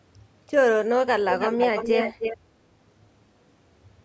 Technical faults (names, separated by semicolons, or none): echo leak